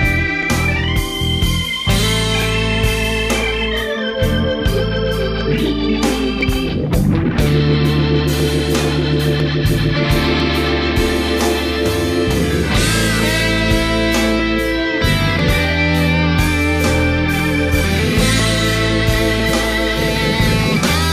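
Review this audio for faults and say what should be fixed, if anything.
Periodic USB or driver dropouts: something stalls the USB bus or audio driver every 1.0 s, from 0.43 s to 20.40 s, and each stall skips about a millisecond of audio, leaving a small regular tick wherever sound is present. To prevent this, find and disable the background task that blocks the driver, or enlarge the audio buffer so it can ride out the stalls.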